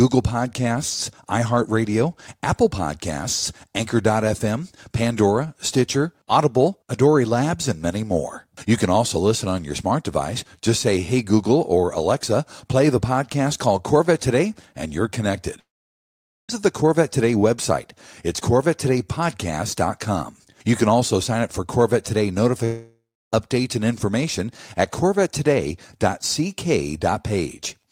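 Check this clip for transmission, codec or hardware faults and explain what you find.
Two gaps interrupt the speech, at 15.59 to 16.51 s and at 22.65 to 23.34 s, each most likely a long network dropout. About 0.9 s and 0.68 s of audio never arrive, and the receiver stretches the last sound into a fading buzz before going quiet: roughly 0.84 s of silence in the first gap, 0.31 s in the second. Unlike a brief packet-loss click, the sound resumes further on with the missing stretch simply gone.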